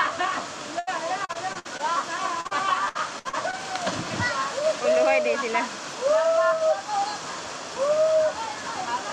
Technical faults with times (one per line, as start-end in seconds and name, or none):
0.79-0.89 burst of packet loss
1.25-1.81 repeated packet loss (robotic sound)
2.41-2.53 short concealed packet loss
2.89-3.55 repeated packet loss (robotic sound)